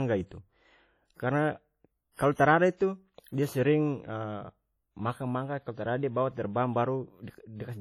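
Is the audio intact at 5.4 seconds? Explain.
No. Heavy WMA compression artefacts span the whole clip, 5.4 s included. Likely a low-bitrate encode smeared quantisation noise, leaving the speech ringing, washy and breathing with hiss.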